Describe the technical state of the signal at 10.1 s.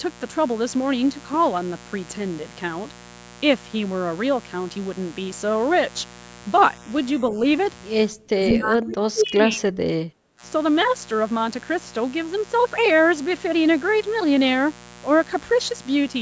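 At 10.1 s the background is gated by the echo canceller. From 10.03 to 10.42 s the canceller pulled the microphone down hard, by about 22 dB at its deepest, so the room sound briefly drops out. The waveform shows a sudden low trough, and the spectrogram a dark vertical band.

A steady mains buzz also runs through this moment. Switching spikes at twice each 60 Hz cycle produce a raspy hum, roughly 20 dB under the speech. On a spectrogram it appears as evenly spaced horizontal lines at multiples of 60 Hz, reaching into the kilohertz range.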